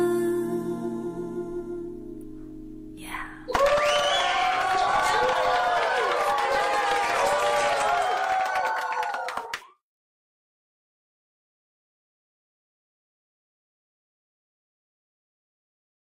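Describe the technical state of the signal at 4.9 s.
At 4.9 s the signal is intact, with no audible fault at that moment.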